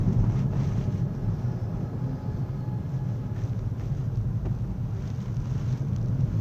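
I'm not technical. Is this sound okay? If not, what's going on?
Yes, this one's fine: nothing in it jumps out as broken or glitchy, so there's nothing to worry about here.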